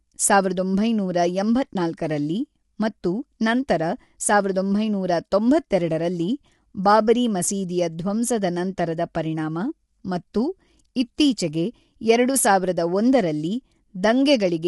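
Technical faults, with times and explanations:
Throughout, low-delay AAC compression: the encoding is likely AAC-ELD, the low-delay codec used in video calls, working at a low bitrate that fits roughly 32 kbps. At that bitrate the bits run short, so the codec damage is plainly audible: the voice sounds rough and grainy, with noise filling the gaps between harmonics, and nothing is left above 11.6 kHz.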